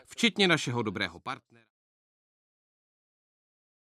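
There are no technical faults to describe in this speech clip.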